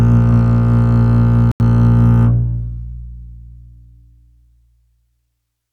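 At 1.52 s the music mutes abruptly for about 90 ms until 1.61 s, a digital broadcast dropout, which fits two corrupted frames. Unlike a skip, there is a silent gap, and the music resumes further along.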